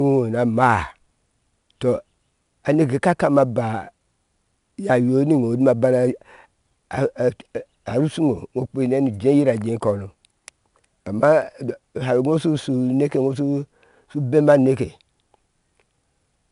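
Across the whole speech clip, 4-bit ADPCM compression adds a gritty hiss that rises and falls with the voice and roughens sharp onsets where the adaptive step lags. Nothing above 10.6 kHz, consistent with roughly 89 kbps, and the steady hiss without warbling set it apart from perceptual codecs.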